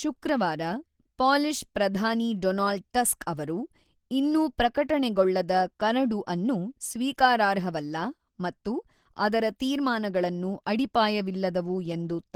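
From start to finish, the speech carries Opus compression artefacts. The sound is hoarse, muffled and grainy, which fits the encoder's hybrid speech mode at a low rate, likely near 16 kbps. Content still reaches about 20 kHz.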